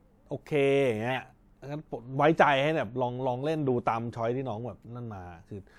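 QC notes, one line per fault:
1.10 to 1.15 s, corrupt frame decoded: a short chirp-like burst cuts across the speech for about 50 ms. Its peak sits around -20 dBFS. It sounds like a single damaged frame that was decoded anyway. Flipped bits made the decoder misread gains or codes. The frame's energy landed at the wrong frequencies. The sound returns to normal once the next intact frame arrives.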